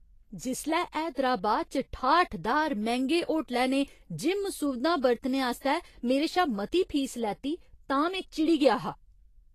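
Throughout the speech, nothing sounds above 14.2 kHz and the treble turns hissy and grainy, with roughened tones. This is likely Vorbis compression at a rate fitting roughly 33 kbps. A spectrogram shows a flat ceiling at 14.2 kHz and speckled, noisy upper bands.

From 5.60 to 5.64 s, after "सुविधां बरतने" and before "मेरे शा मती फीस", a brief hiss of about 48 ms leads into a sharp attack, which sounds smeared. This pre-echo comes from coding noise spread across the transform block. The waveform shows low fuzz rising just before the onset.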